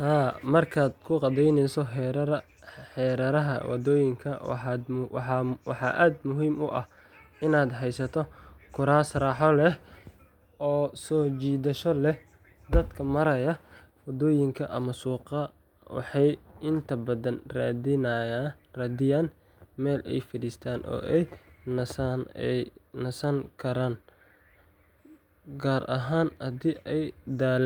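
Speech recording, no technical faults audible anywhere in it.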